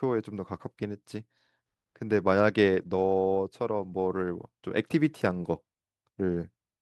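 From 2.69 to 2.99 s and 3.79 to 4.05 s, lost packets are rebuilt from error correction. Low-bitrate backup copies fill the gaps, so the speech sounds rougher and noisier, not silent.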